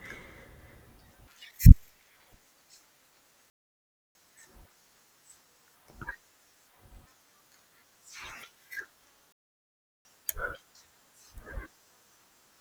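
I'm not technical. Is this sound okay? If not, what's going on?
No. The speech cuts out twice, at 3.5 to 4.15 s and at 9.32 to 10.05 s, each time for under a second. These are playback stalls. The player likely ran short of data or got held up, so it went silent until it caught up.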